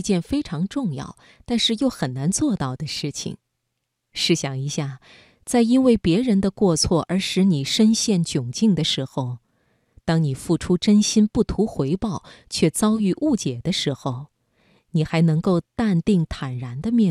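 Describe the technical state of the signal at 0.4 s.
At 0.4 s the signal is intact, with no audible fault at that point.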